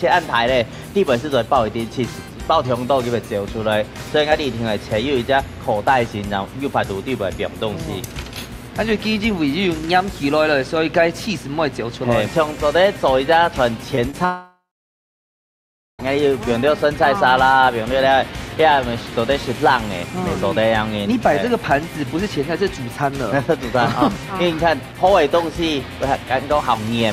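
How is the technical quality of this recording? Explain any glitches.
The recording has a steady mains buzz throughout, and a cluster of network glitches around the middle.

Mains buzz: A constant raspy buzz sits under the whole recording, roughly 35 dB below the main sound. It is built on 50 Hz and its harmonics, which extend well into the kHz range. That spiky, harmonic-rich character comes from switching electronics such as a dimmer or rectifier, or from an unshielded connection, injecting sharp pulses twice per mains cycle into the audio path.

Short concealed packet loss: At 13.95 to 13.99 s and again at 14.11 to 14.15 s there are brief smears, each lasting about 20 ms. In each case a small slice of audio failed to reach the decoder in time. The receiver bridged the gap by extending the preceding sound, carrying its pitch or shaped noise forward, and then cross-faded back into the real signal. 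This leaves a momentary wobble, and a very short sound could be lost.

Long network dropout: From 14.25 s to 16.01 s the audio vanishes for about 1.7 s. For the first few tenths of a second the last sound stretches into a fading buzz or hiss. After that there is silence for about 1.4 s, and the audio then resumes further along with the missing section gone. This is likely a network dropout, where no packets arrived for that stretch and the receiver's concealment ran out before the stream came back.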